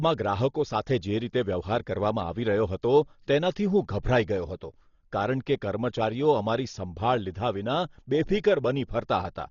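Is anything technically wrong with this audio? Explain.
Yes. Throughout the speech there's heavy codec damage that sounds like Dolby Digital compression, likely at a very low rate, around 32 kbps. Nothing comes through above about 6.9 kHz, so it's dull, and the encoder starving many frequency lines of bits leaves a rough, fluttery noise hanging around the tonal parts.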